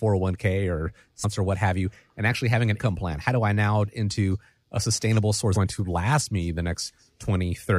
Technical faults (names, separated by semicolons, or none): compressed frames skipped